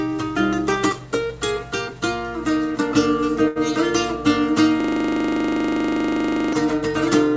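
At 3.48 s there's a short stall from a late packet. The jitter buffer ran dry, so the last sound gets stretched for about 78 ms until delivery resumes, with nothing actually lost. Then from 4.80 to 6.53 s comes a system hang loop, where a frozen driver left the hardware replaying one 40 ms chunk, giving a steady 25 Hz buzzing stutter.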